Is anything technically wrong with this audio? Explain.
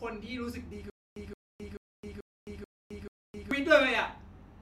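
Yes. The speech has a stutter with silent gaps from 0.90 s to 3.51 s. A short burst of about 172 ms plays, then drops to dead digital silence for about 264 ms. The same burst returns every 436 ms, six times in all. The cause is likely a stalled player or stream that replays its last buffered fragment on each retry and then runs dry. The speech that belonged in those gaps is simply missing.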